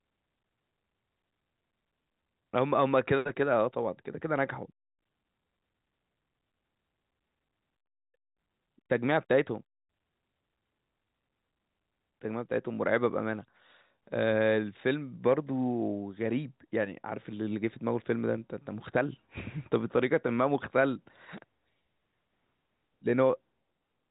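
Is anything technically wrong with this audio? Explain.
No, the speech is carried over ordinary G.711 telephone coding, with nothing above about 3.8 kHz as that path dictates, and nothing in the audio amounts to a technical fault.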